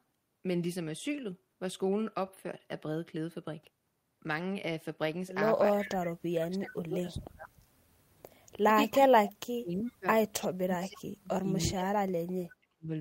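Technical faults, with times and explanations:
5.69–5.98 s, 6.27–7.51 s, 8.93–10.07 s, 10.41–11.48 s, 11.66–11.99 s and 12.16–12.9 s, speech suppressed in double talk. The speech level plunges in these stretches. The first dip is the least deep, about 25 dB. The rest go deeper, about 35 to 40 dB, nearly silencing the talker. The likely cause is an echo canceller that hears both ends talking at once. It cannot tell this talker from loudspeaker echo, so it turns everything down.
5.81–6.13 s and 10.42–10.47 s, echo leak. A faint delayed copy of the speech surfaces, trailing the original by 317 ms. It sits about 20 dB below the speech at 5.81 s and about 25 dB below at 10.42 s. Both scraps are brief. The later one lasts only about 50 ms. They likely come from a loudspeaker whose echo canceller missed part of the pickup and sent it back down the line.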